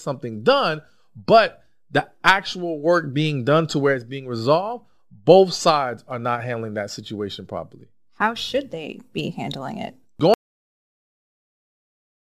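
The audio input was most likely lost at 10.34 s, right after "they be handling it", and the recording chain kept writing silence rather than stopping. This is an audio dropout to silence: the speech cuts off mid-flow and the remaining 2.0 s, through to the end of the clip, are completely empty, with no room tone or background left. Nothing spoken in that stretch survives.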